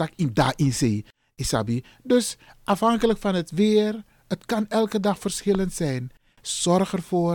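A loud pop hits at 2.73 to 2.75 s, before "van het weer het". It peaks a few dB above the speech. A stronger pop, about 10 dB above, follows at 5.55 to 5.57 s, after "het kan elke dag". Each is one sharp click. The likely cause is a voltage spike.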